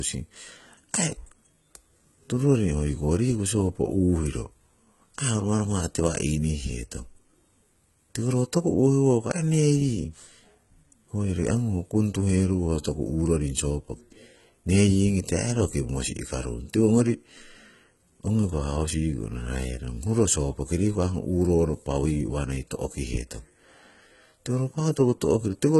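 Throughout the speech, the treble is synthetic: the upper band sounds copied and coarsely shaped, so s sounds turn gritty and lispy. The heavy damage points to low-bitrate coding, likely HE-AAC compression near 16 kbps with band replication.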